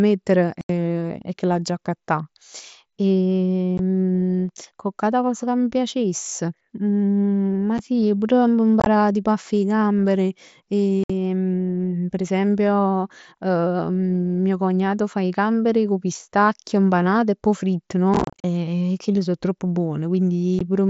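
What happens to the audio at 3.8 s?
Right at 3.78 s there's a brief dropout, unconcealed Bluetooth headset packet loss. About 15 ms of audio between headset and phone went missing, which fits a couple of lost packets, and silence or an idle pattern filled the gap. You get a tiny hole with hard edges, against the light graininess of the mSBC link.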